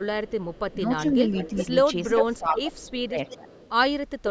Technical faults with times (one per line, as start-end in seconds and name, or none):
0.00-0.74 echo leak
1.17-1.68 speech suppressed in double talk
1.35-1.66 echo leak
2.09-2.92 echo leak
2.12-3.49 speech suppressed in double talk
3.29-3.70 echo leak